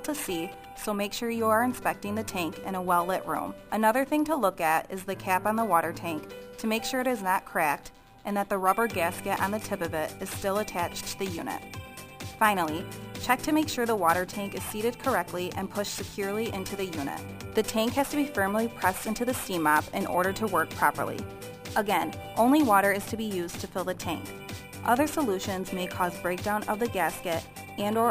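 Imaging from sample-and-hold upsampling runs through the whole clip. The rate was raised from 22 kHz to 44.1 kHz by repeating samples without smoothing. Mirror images fill 11 kHz to 22 kHz, about 20 dB below the signal. They sound like a metallic fizz that tracks the audio's level.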